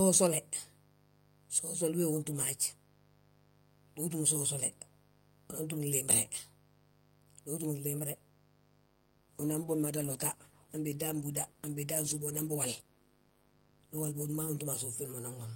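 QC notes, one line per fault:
Throughout: mains buzz. A steady, raspy buzz sits under the speech, around 30 dB below it. It is built on 50 Hz mains, but switching spikes from something like a dimmer, a rectifier or a missing shield enter twice per cycle. That puts a dense comb of harmonics of 50 Hz reaching into the kilohertz range. The result is a gritty edge rather than a smooth hum, and it stays constant regardless of what is said.
8.89 to 14.57 s: call bitrate drop. The speech turns coarse and muffled, with a watery, smeared texture, and stays that way for about 5.6 s before recovering near the end. The change fits the encoder falling from around 48 kbps to around 16 kbps after the call's bandwidth estimate dropped. With so few bits, Opus quantises the spectrum roughly and trims the high frequencies, which dulls consonants and adds the rough, underwater quality heard here.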